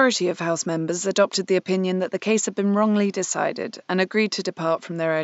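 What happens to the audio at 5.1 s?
Nothing goes wrong at 5.1 s: the speech there is intact, with only the faint room noise in the background, about 44 dB below the speech.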